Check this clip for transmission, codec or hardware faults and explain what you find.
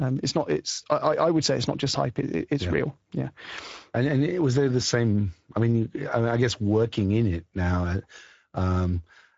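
One fault runs through the whole recording: Speex codec damage. From start to finish the speech carries a plainly audible coded, grainy texture, and nothing is heard above about 7.6 kHz. Speex is a CELP codec that rebuilds speech from a predicted spectral envelope plus a coarsely coded excitation signal. Here the excitation is starved enough that the roughness is clearly audible. The character of the damage points to a wideband mode of roughly 16.8 kbps.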